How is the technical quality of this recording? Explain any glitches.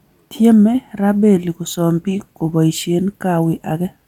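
No glitches can be heard in this recording. At no point in the speech does anything stand out as a technical fault.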